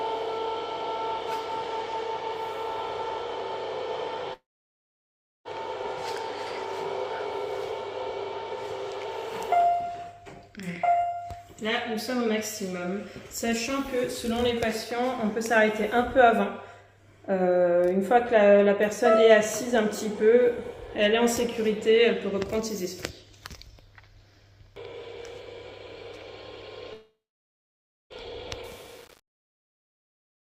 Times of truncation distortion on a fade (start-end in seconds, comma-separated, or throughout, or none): 28.64-30.52